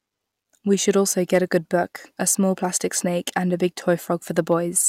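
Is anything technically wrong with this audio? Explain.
Yes, there's a short patch of hard clipping near the end, from about 4.39 to 4.53 s. The speech peaks there are pushed roughly 1 dB past what the signal path can carry, so the tops of the waveform get sheared off flat. Those flattened tops add extra high harmonics that weren't in the original, and since the overload is mild, you hear a brief crackly roughness on the loudest moments rather than a constant fuzz.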